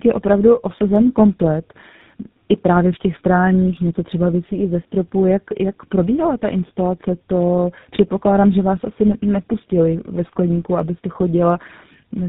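Tandem speech coding runs through the whole clip. The speech passed through two low-rate speech coders in a row, which fits a G.729A link followed by GSM full rate, the second re-coding the first's damage. It sounds rough, muffled and warbly. A spectrogram shows nothing above 3.8 kHz and smeared formants.

From 0.17 s to 12.20 s, faint regular ticks recur about ten times a second, roughly 150 in all. These are clock slip clicks, likely from two unsynchronised clocks drifting apart by around 300 ppm, so single samples are dropped or repeated. The waveform shows tiny evenly spaced discontinuities, and a spectrogram shows faint vertical lines.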